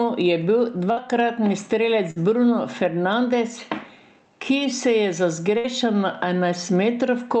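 Gain pumping runs through the whole speech clip: the level swings by around 15 dB. The likely cause is input gain set far too high, with a fast limiter or compressor clamping down on every peak and releasing in the gaps. Loud and quiet passages end up pressed close together, so the sound feels squashed and breathing.

A burst of packet loss hits at 0.91 to 1.00 s, just after "je bil", again at 2.11 to 2.19 s, and at 5.58 to 5.67 s, right after "se je za". Each time a run of audio, about 60 ms, never arrived in time. The receiver stretched the last sound for roughly 50 to 60 ms, fading it out as a held buzz or hiss, then jumped ahead, leaving a short hole in the speech.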